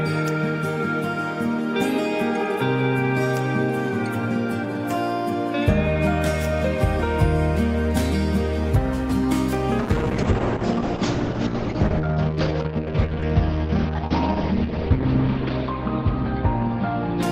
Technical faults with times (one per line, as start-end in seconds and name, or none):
9.80-17.32 call bitrate drop